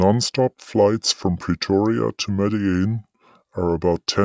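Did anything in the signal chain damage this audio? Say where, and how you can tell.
Yes: the speech runs low and slow throughout, 5.5 semitones down at 0.73 speed. This is a wrong sample rate at playback, fitting 22 kHz audio played at 16 kHz.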